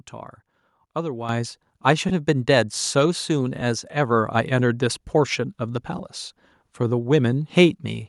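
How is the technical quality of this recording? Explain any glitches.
The recording has two technical problems: a sudden jump in level early on and three brief smeared dropouts later in the speech.

At 1.29 s the whole signal, voice and background together, becomes louder in a single step of about 8 dB and stays there. This is a microphone volume stepped up: the call software judged the input too quiet and raised the device's input gain all at once rather than gradually. Because gain is applied before anything else in the chain, speech and room noise move up by the same amount.

At 2.09 s, 3.61 s and 5.98 s there are brief blurred, noisy patches, each about 10 ms long. These are lost LE Audio frames. Each gap's length fits a single missing 10 ms frame on the Bluetooth LE Audio link. The LC3 decoder filled each gap by repeating the previous frame's spectrum with randomised phase signs, so the tonal detail of the speech turns into a short noisy smear before normal decoding resumes.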